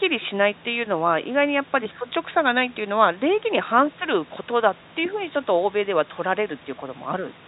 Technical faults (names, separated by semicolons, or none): none